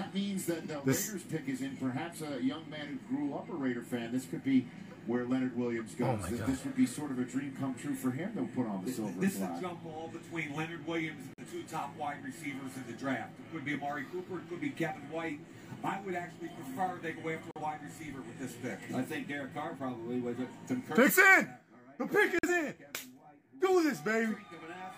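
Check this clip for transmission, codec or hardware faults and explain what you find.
Three dropouts from corrupt frames being muted, at 11.34–11.48 s, 17.51–17.60 s and 22.39–22.49 s. Damaged compressed frames were rejected by the decoder and replaced with silence. Each gap is abruptly cut, spans a few frame lengths, and keeps the timing intact. On the waveform they show as flat, near-silent gaps, and on the spectrogram as blank vertical bands across all frequencies.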